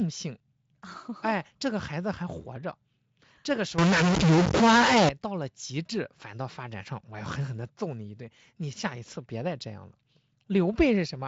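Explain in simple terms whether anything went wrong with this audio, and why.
From 3.78 to 5.09 s the speech turns distorted, with hiss filling pauses. This is a stuck bit: one data bit likely frozen, distorting about half the samples.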